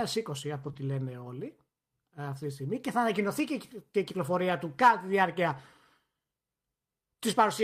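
At 0.63 to 0.69 s, a lost packet rebuilt from error correction: about 40 ms, consistent with two dropped packets, was replaced from low-bitrate backup copies, so this speech turns briefly rougher and noisier. From 0.71 to 0.75 s comes a short concealed packet loss: 20 ms never arrived and was filled by extending the preceding sound, leaving a brief smear. From 0.75 to 0.77 s, just before "λένε όλοι ε αυτή", another 20 ms is rebuilt from error correction with the same coarse texture. At 4.49 s, between "θα ανακοινωθεί και η" and "του κατά τη διάρκεια", a single 20 ms rebuilt frame gives a momentary grainy patch.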